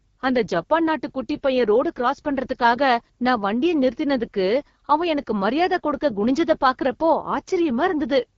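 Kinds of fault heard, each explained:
AMR wideband (HD Voice) codec: throughout this speech the low-rate mode, which fits about 8.85 kbit/s, models the vocal tract crudely, leaving rough, raspy distortion and noise-filled upper band.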